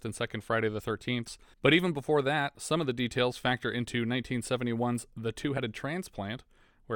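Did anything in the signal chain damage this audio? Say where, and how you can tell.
Yes. Compressed frames were skipped at 1.27 s, just before "but even before that", and again at 5.57 to 5.60 s. About one 20 ms codec frame was dropped or rejected by the decoder, so the speech jumps ahead.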